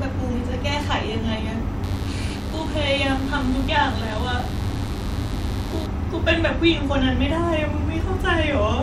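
Speech, with a mains buzz cutting in from about 1.83 s to 5.87 s: a steady, raspy 50 Hz rasp sitting roughly 20 dB under the voice. Switching spikes from something like a dimmer or poor shielding are throwing harmonics well up into the kilohertz range.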